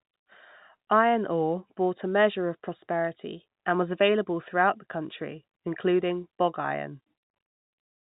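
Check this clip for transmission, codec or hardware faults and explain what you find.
Nothing here points to a transmission, codec or hardware problem; the speech comes over as ordinary narrowband telephone audio, with nothing above 4 kHz, as you'd expect from a G.711 line.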